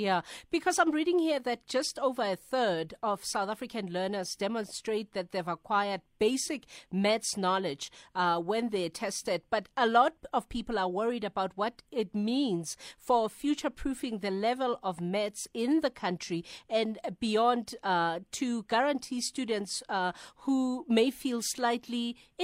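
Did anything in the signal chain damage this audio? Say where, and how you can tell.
No, nothing in the signal chain damaged this audio that I can hear.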